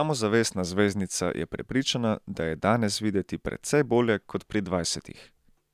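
Nothing goes wrong anywhere in this bit of speech, so there's no fault to point to at any moment.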